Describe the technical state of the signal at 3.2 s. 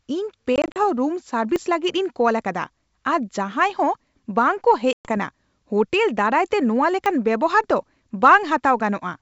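At 3.2 s the speech is intact, passing through G.722 wideband telephone coding at 64 kbit/s, which leaves at most a faint trace of its own.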